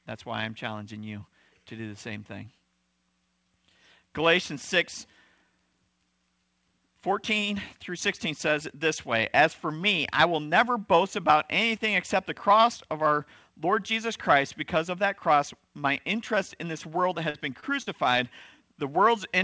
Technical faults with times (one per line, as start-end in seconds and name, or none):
17.30-17.88 short concealed packet loss